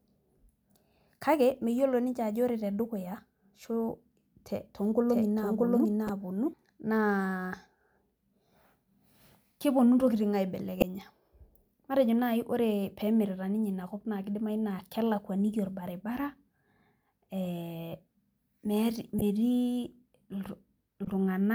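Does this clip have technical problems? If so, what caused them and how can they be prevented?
Yes. From 5.09 to 6.53 s there is a doubled audio track: a second, roughly equal-level copy trails by about 0.7 s and cuts in and out abruptly, likely from a duplicated capture path. On a spectrogram, the same full-band pattern repeats, shifted later. Prevent it by routing each source through only one recording path.

Corrupt frames were decoded at 6.06 to 6.10 s, 10.80 to 10.84 s, 19.19 to 19.22 s and 21.05 to 21.08 s. The decoder played damaged frames, producing brief bursts of misplaced energy peaking around -10 to -25 dBFS. Each shows as a short, misplaced vertical smear. Prevent this with error-checked transport and concealment of damaged frames instead of decoding them.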